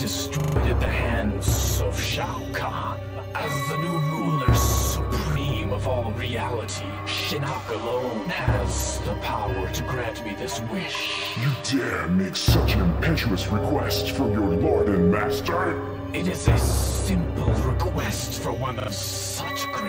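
Three stutters from a repeated buffer break up the audio: at 0.40 to 0.56 s the same short slice plays four extra times, at 5.32 s once more, and at 18.80 to 18.88 s twice more. Each repeat is about 40 ms long, which fits a 40 ms playback buffer being replayed when fresh data arrived late. A hard splice marks every join, and roughly 150, 40 and 70 ms of the original audio are skipped. On a waveform the identical blocks tile side by side, and a spectrogram shows copied patches separated by thin vertical lines.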